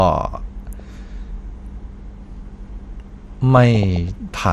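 Throughout, the speech is dull and grainy, with upper bands dropping in and out and a gurgling edge on every sound, which is likely MP2 compression at a low rate, around 80 kbps. Unlike broadband hiss or uniform low-pass filtering, the damage flickers band by band.

At 0.79 s a brief watery blip marks DAB burbling, and it returns more heavily from 3.57 to 4.09 s as a run of bubbling chirps. Residual bit errors corrupt single sub-bands frame by frame, so isolated bands jump in level, wetter and more erratic than steady codec grain.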